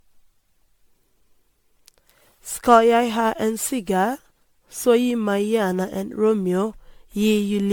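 Throughout the speech, a swirly, hollow smear and blurred attacks point to generation loss, likely about ten MP3 passes near 98 kbit/s. A single encode at that rate wouldn't sound this degraded; each pass requantised on a shifted frame grid. Content stops near 19.9 kHz.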